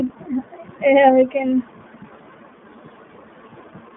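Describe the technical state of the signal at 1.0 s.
At 1.0 s, as throughout, the iLBC codec damage is plain. Nothing passes above 3.8 kHz. Independently coded 20 ms frames make the speech sound rough and synthetic.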